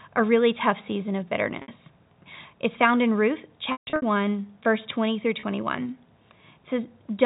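Packet loss with pitch repetition strikes three times in this speech. At 1.62 s, about 60 ms drops out. The receiver loops the last pitch period, so the sound holds briefly with a buzzy edge. From 3.72 to 4.02 s, gaps totalling 240 ms are scattered across 300 ms. The longest run is 150 ms, long enough for the repeat to fade into silence. At 5.40 s, a 30 ms loss gives a brief held buzz. The telephone-band G.711 sound carries on through.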